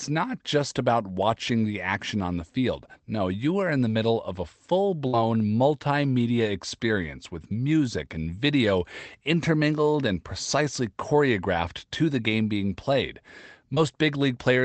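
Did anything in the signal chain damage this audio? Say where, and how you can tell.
Yes, and it's the network. At 5.07 to 5.15 s there's a burst of packet loss. The receiver ran out of real audio, so it stretched the last sound for about 55 ms and let it sag in level as a held, fading tail. When the stream picks up again, roughly 60 ms of the original is gone, so the sound jumps ahead rather than continuing where it left off.

The second fault is a short concealed packet loss around 13.75 to 13.78 s, again a network hiccup, just much smaller. Only about 20 ms failed to arrive in time for the decoder, and the concealment patched it with roughly 16 ms of synthesised continuation before blending back into the real signal. You hear it as a quick smear or little wobble. It sits on top of the Opus call path, whose 8 kHz bandwidth you can hear in the dull top end.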